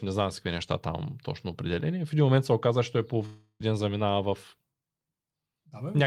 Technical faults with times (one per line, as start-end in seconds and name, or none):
3.25-3.62 long network dropout